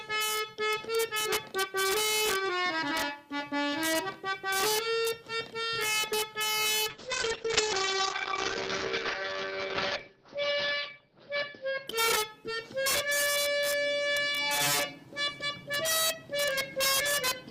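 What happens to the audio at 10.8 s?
At 10.8 s the call is in a bitrate drop that runs from 6.91 s to 13.19 s. The bandwidth estimate fell and the encoder's rate was cut from 48 kbps to 8 kbps, holding at its lowest for about 3.5 s. Coding becomes coarse and the audio band shrinks from 20 kHz to 6 kHz, so the sound turns muffled, rough and watery.

An integer overflow runs through the whole clip and is present here too. The signal is driven about 6 dB past the integer limit without being clamped, so a small fraction of the loudest samples wrap to the opposite extreme. Each one lands as a violent crack on the peaks, far harsher than ordinary clipping.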